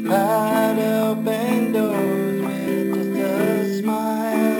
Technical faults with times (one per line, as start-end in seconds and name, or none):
0.00-4.60 imaging from sample-and-hold upsampling